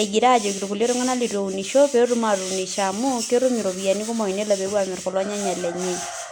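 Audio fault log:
Nothing stood out on listening to this speech recording.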